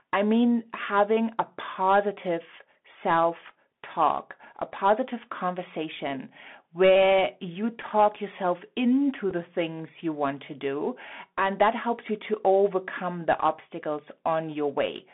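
From start to finish the speech carries the sound of a Bluetooth CVSD headset codec. The band sits roughly between 200 Hz and 3.5 kHz, and a one-bit delta coder tracking the waveform leaves a plainly audible granular hiss beneath it. Sibilants come out scratchy, and loud bright moments smear where the adaptive step cannot keep up. That gritty, slope-limited roughness, which fits a 64 kbit/s CVSD link, is what sets it apart from ordinary band-limited telephone audio, which is narrow but clean.

At 7.82 s comes a Bluetooth headset packet repeated. About 7.5 ms of sound is missing, which fits two lost packets, and the decoder fills the gap by decoding the previous bits again. A second repeat at 9.31 s covers about 3.8 ms, roughly one packet, and is a small, single tick. Unlike a dropout, neither gap falls silent.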